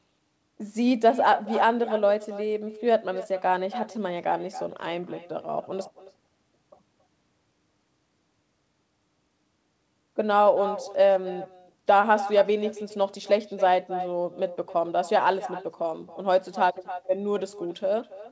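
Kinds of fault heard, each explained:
Echo with no canceller: the far end's loudspeaker feeds its mic and nothing removes the leak, so the talker's speech returns as a thinner shadow roughly a third of a second late, about 14 dB down, for the whole clip.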